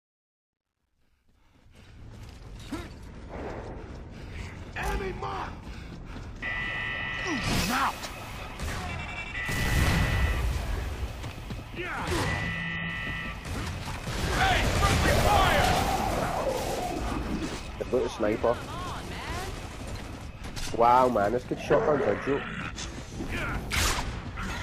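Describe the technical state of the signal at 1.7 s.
At 1.7 s the fade-in still carries truncation distortion, which spans 0.00 to 2.09 s. The gain stage keeps about 12 bits without dither, so low-level detail collapses into coarse steps. Here it sounds gritty, less broken than the worst stretch from 0.00 to 1.07 s.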